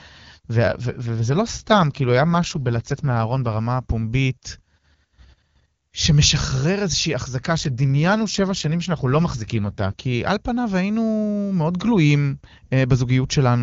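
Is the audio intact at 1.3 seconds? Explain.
No. An AMR rate drop runs from 0.66 to 3.59 s: the codec falls to a lower rate, which fits a step from 23.85 to 8.85 kbit/s, spending bits on error protection. The bandwidth stays full and nothing drops out, but the speech turns rough and synthetic.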